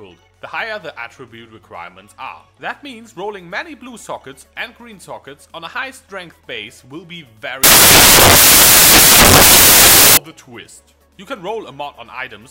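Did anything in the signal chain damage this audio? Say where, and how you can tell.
Yes. From 7.64 to 10.17 s the sound turns into loud, harsh broadband noise: samples built from the wrong bytes, a sample-format conversion fault. The reader misassembled each sample's bytes, so the jittery low bits landed in the high end and swamped everything.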